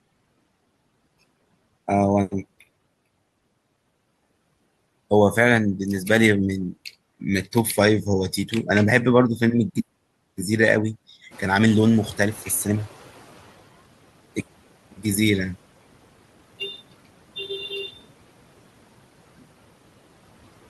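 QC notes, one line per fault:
11.31–13.62 s noise suppressor catching up. Background room noise jumps by about 15 dB around 11.5 s. The suppressor's noise estimate lags behind this rise. The louder noise first passes with little reduction. Over about 2.3 s it sinks by about 11 dB as the estimate adapts.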